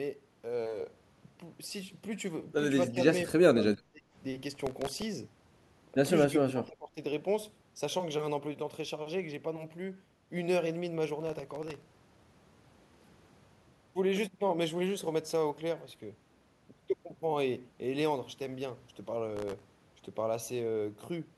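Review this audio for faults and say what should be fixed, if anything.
The echo canceller likely mistook double talk for echo, producing speech suppressed in double talk: the speech dips at 2.88–3.0 s, 3.49–4.04 s and 6.27–6.97 s, by up to about 30 dB. Tuning the canceller's double-talk detector to hold the near-end path open while both sides speak would prevent this.

The processor missed about twenty to forty buffer deadlines over each short stretch, repeating stale audio, which causes processor overload crackle: gritty tearing at 4.55–5.02 s, 11.20–12.31 s and 19.37–19.63 s, fitting buffers under a millisecond. Larger buffers or a lighter processing load would prevent it.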